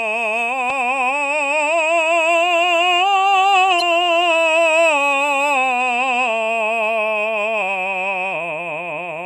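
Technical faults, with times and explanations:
Throughout: MP3 compression. The music has a watery, swirling quality, with metallic chirps on cymbals and blurred attacks, plainly audible and most likely from an MP3 encode at a rate that fits 64 kbps. Short of bits, the encoder cuts the treble at a fixed frequency and drops weak frequency lines, which flicker on and off between frames. A spectrogram shows a flat ceiling across the top and scattered holes in the upper bands.
3.78 to 3.82 s: damaged data in a compressed stream. A brief glitch cuts into the music for about 40 ms. Some of the compressed data in this spot is wrong, so the decoder misreads the frames there, loses its place and hunts for the next valid frame header before playback settles again.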